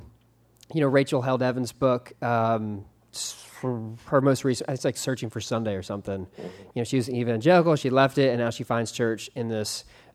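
Listening closely to the speech, nothing stood out as a technical fault at any point.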